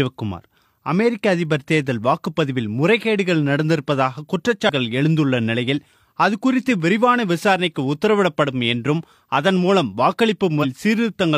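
Damaged data in a compressed stream at 4.65–4.70 s and 10.59–10.65 s: corrupted frames make the decoder lose sync and resynchronise, producing brief glitches.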